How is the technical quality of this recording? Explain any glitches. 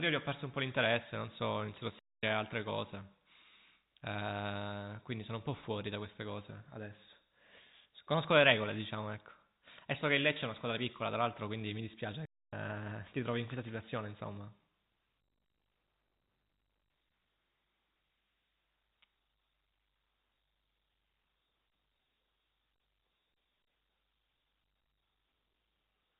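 The speech carries two short dropouts, heard over a telephone-band signal with nothing above 4 kHz.

Playback stall at 1.99–2.23 s and 12.25–12.53 s: the sound halts for roughly a quarter second each time, then resumes, likely because the player briefly ran out of buffered data.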